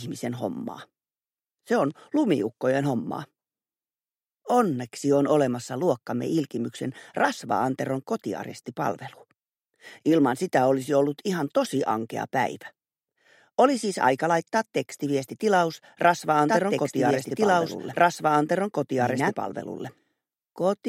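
Doubled audio track from 16.48 s to the end: a copy about as loud trails roughly two seconds behind, starting abruptly, likely from a slower second capture path.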